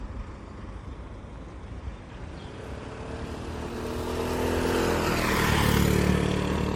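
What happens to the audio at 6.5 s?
At 6.5 s the audio sounds swirly, hollow and smeared, with blurred attacks and nothing above 16.5 kHz, as it does throughout. This is likely generation loss: repeated MP3 encoding, about five passes at what fits 64 kbit/s, each requantising on a shifted frame grid so the damage accumulates.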